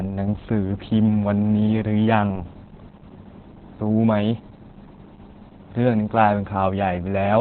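Opus voice compression runs throughout: the speech is cut off above about 4.4 kHz, and coarse excitation coding leaves it muffled, hoarse and slightly robotic, which fits narrowband SILK near 8 kbps.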